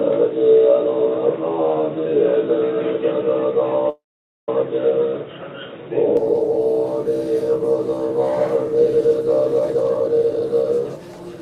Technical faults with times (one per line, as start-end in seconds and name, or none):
0.00-6.17 input switched to a poorer device
3.89-4.49 call audio freeze
9.60-11.37 jitter buffer speed-up